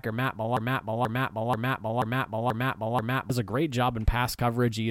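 From 0.57 s to 3.30 s the speech falls into a broken-record loop: one 0.48 s fragment repeats six times, likely from a stalled stream resending its last buffer, losing the real audio before "a great". Spectrogram and waveform show identical blocks tiling every 0.48 s.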